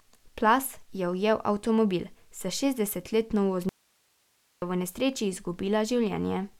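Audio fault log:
3.69–4.62 s, audio dropout to a faint residue: right after "ujel avtomobil s šestdesetletno" the speech cuts out abruptly for 0.93 s, leaving only hiss about 40 dB down, then snaps back at "v nesreči". The likely cause is a lost feed while the path after the break stayed live.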